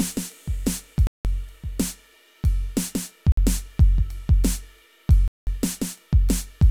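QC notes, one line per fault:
1.07 to 5.47 s, Bluetooth stall, three times: the music cuts to silence at 1.07 s for 178 ms, at 3.32 s for 53 ms and at 5.28 s for 192 ms, then carries on. Each gap is a clean drop to nothing rather than a fade or a burst of noise. This is likely radio interference holding up packets, so the headphones' buffer ran empty and playback paused until the resent data arrived.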